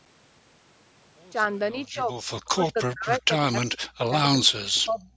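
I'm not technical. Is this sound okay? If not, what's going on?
No. Between 1.74 and 2.14 s, 2.54 and 4.51 s, and 4.85 and 5.07 s the speech dips and, in the middle stretch, nearly vanishes in pieces. This is speech suppressed in double talk, likely because someone on the other end spoke at the same time.

At 4.74 to 4.79 s there is a very faint echo leak: a brief, quiet copy of earlier sound, about a third of a second late. The likely cause is a speakerphone's echo cancelling letting a scrap through. It is a repeat, not a loss.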